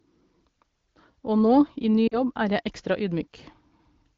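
At 2.08 to 2.19 s the speech smears, then fades toward silence before returning rough for a moment. These are lost AMR speech frames: about 40 ms failed over the radio, fitting two 20 ms frames, so the wideband decoder repeated the last good settings at falling gain.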